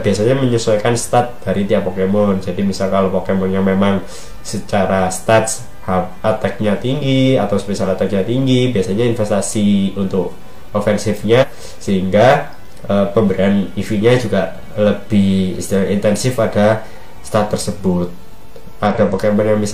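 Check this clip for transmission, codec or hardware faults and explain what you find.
Two short faults are present, both damaged data in a compressed stream. At 11.38 to 11.45 s and 18.86 to 18.95 s, corrupted bytes make the decoder misread frames and lose sync until it finds the next frame header, producing brief chirp- or blip-like bursts of about 60 to 100 ms.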